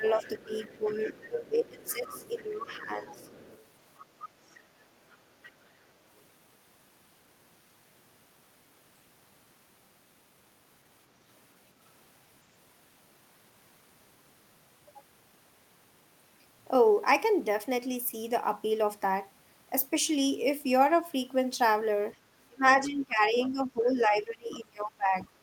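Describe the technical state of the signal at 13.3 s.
At 13.3 s the speech signal is intact, with no audible technical fault at that moment.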